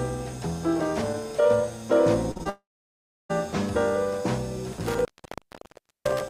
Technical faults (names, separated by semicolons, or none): short concealed packet loss; long network dropout; intermittent contact